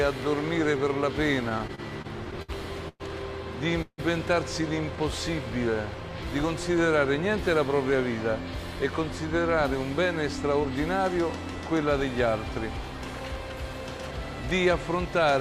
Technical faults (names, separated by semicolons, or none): repeated stalls (stutter); call audio freeze; jitter buffer speed-up